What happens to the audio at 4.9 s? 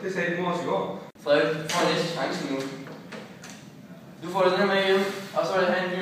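Nothing goes wrong at 4.9 s; the audio plays through that moment intact, with no dropout, click, glitch or other audible fault.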